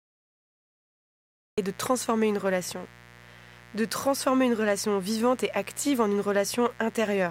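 A dimmer, rectifier or unshielded cable in the recording chain is letting sharp switching spikes from the 60 Hz mains into this speech recording, two per mains cycle, and their harmonics climb from 60 Hz into the kilohertz range. The result is a mains buzz running under the whole clip: a steady, raspy edge rather than a smooth hum, sitting somewhere around 25 dB below the speech. Separately, capture began late, so the clip shows a cut-off start: from 0.0 to 1.58 s there is only digital silence, and at 1.58 s the audio jumps straight in partway through an ongoing sound, with no natural attack or fade leading into it.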